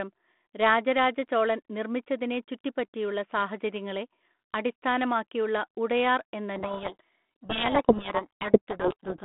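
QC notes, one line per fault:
6.56 to 9.24 s, codec payload misread: from 6.56 s to the end, the sound sinks under harsh, gritty distortion. Up to that point the 200 Hz to 3.5 kHz telephone-band G.726 audio, which sounds like 32 kbit/s, carries only light coding damage. Here the two ends disagree on the bit order of the G.726 code words, so the decoder reads each sample's difference value scrambled. The adaptive prediction drifts and the errors pile up as rasping noise.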